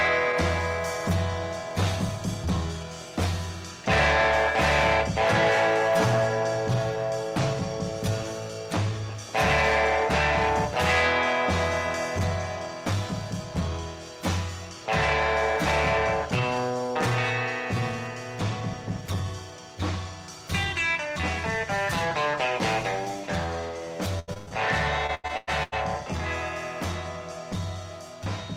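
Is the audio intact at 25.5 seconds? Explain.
No. Repeated packet loss (robotic sound) runs from 25.07 to 25.74 s. Five gaps in quick succession, the longest about 100 ms, are each patched by stretching the preceding sound, so nearly half that stretch is filler, giving a choppy texture with pieces missing.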